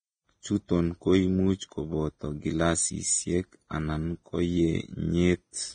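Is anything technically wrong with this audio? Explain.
Yes. Throughout, nothing sits above 9.7 kHz, and the treble sounds hissy and grainy, which points to heavy, likely Vorbis compression at a low bitrate coarsely quantising fine detail into noise.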